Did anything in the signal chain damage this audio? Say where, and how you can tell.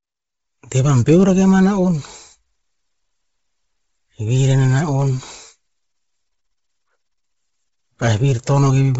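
Yes, at the codec stage, throughout the speech. Nothing survives above 7.7 kHz, and the top band sounds breathy and grainy. A spectrogram shows a hard ceiling with speckled noise instead of harmonics. This is likely heavy Bluetooth LC3 compression, fitting a low bitrate near 24 kbps, which zeroes upper transform bins and noise-fills them.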